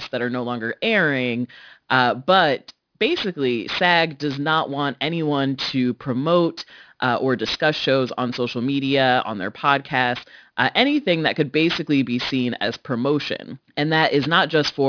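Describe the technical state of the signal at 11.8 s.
Aliasing is present at 11.8 s, as it is across the whole clip. The sound fits a resampling from 48 kHz to 11 kHz without an anti-aliasing filter, so content above 5.5 kHz folds back down at roughly 15 dB below the speech, making sibilants gritty and metallic.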